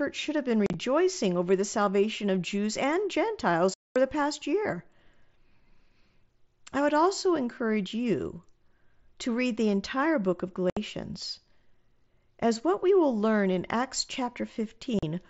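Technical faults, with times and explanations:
0.66–0.74 s, 3.74–3.96 s, 10.70–10.77 s, 14.99–15.03 s, unconcealed Bluetooth headset packet loss: hard-edged, silent gaps (after "should have been", before "the past year", after "the entire book of") where lost mSBC headset frames went unfilled, with no smeared or repeated fill as concealment would give.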